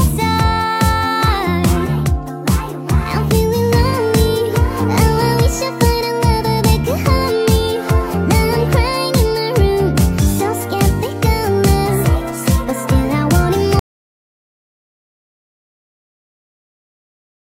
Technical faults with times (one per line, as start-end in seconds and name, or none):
13.79-17.45 audio dropout to silence